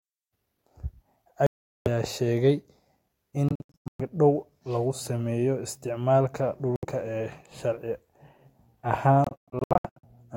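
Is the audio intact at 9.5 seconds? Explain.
No, packets were likely dropped before reaching the headphones, a Bluetooth dropout from 9.24 to 10.05 s: about 0.49 s of speech vanishes in silent gaps up to 116 ms, then resumes further along.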